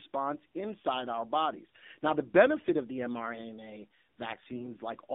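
The whole clip runs through an AMR narrowband mobile codec, and the damage is plainly audible. The line only carries about 200 Hz to 3.7 kHz, and the speech has that buzzy, synthetic edge that points to a low-rate mode, around 7.4 kbps.

From 4.40 to 4.72 s you get AMR bit errors. The less protected bits in the frames arrive flipped, so the excitation pulses and fine pitch, gain and spectrum values go wrong. Pitch and level roughly hold, but the voice turns hoarse and gargly.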